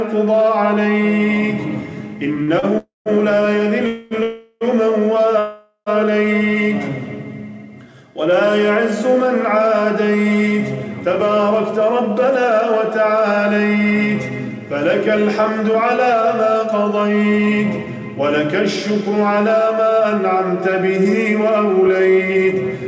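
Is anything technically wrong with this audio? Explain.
Yes. Between 2.36 and 2.66 s there is repeated stalls (stutter): three short gaps, the longest 47 ms, are filled by continuing the last sound, so the audio drags.

Four call audio freezes follow, at 2.78–3.09 s (281 ms), 3.87–4.14 s (241 ms), 4.23–4.64 s (380 ms) and 5.39–5.89 s (476 ms). Each holds a continued, fading sound, with 160 ms and 50 ms of silence in the first and last, before resuming where it stopped. The likely cause is packets held up in transit, emptying the jitter buffer.

From 11.30 s to 22.81 s a jitter buffer speed-up plays the audio about 5% fast at unchanged pitch. Repeated removal of short pitch-period pieces trims roughly half a second, which sounds slightly hurried. This runs over the G.722 call path, with nothing above 8 kHz.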